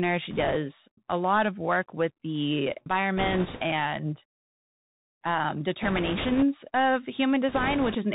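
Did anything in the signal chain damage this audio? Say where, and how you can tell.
Yes. Throughout, the sound is muffled, with nothing above 4 kHz, scratchy s sounds and a granular hiss: the codec stage, a Bluetooth CVSD headset codec whose adaptive one-bit steps can't track loud high content.

Rushing, crackly bursts without sharp clicks occur at 0.31–0.56 s (before "a lot of work"), 3.17–3.62 s (after "of work with the"), 5.82–6.44 s and 7.49–7.95 s. These are bit errors on a Bluetooth voice link, worst in the second burst.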